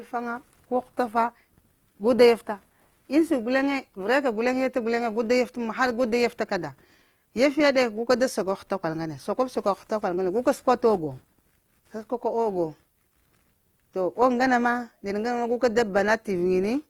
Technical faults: Opus compression

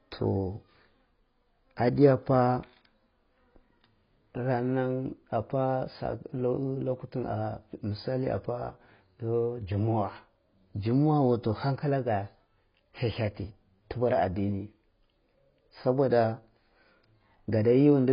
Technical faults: AAC compression

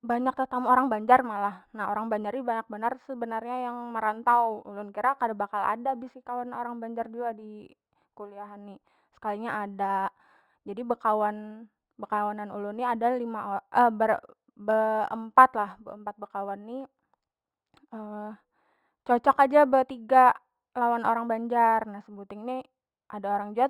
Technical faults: imaging from linear upsampling

